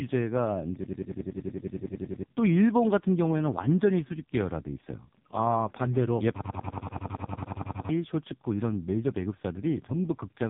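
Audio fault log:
Throughout: AMR narrowband mobile codec. The speech passes through AMR-NB at a low rate, which fits its 5.15 kbps mode, and the codec damage is heavy. The codec rebuilds the voice from a vocal tract model excited by a pitch predictor and a handful of pulses every 5 ms, so at this bit budget the voice turns buzzy and synthetic. With 8 kHz sampling, nothing above about 3.8 kHz survives, leaving a muffled, telephone-like band.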